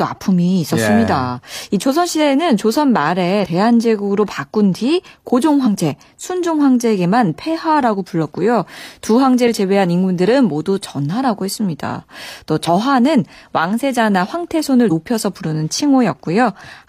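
Speech with damaged data in the compressed stream. Brief garbled blips occur at 3.39–3.46, 5.62–5.68, 9.43–9.49, 12.64–12.69 and 14.86–14.91 s, where the decoder misreads corrupted frames and resyncs.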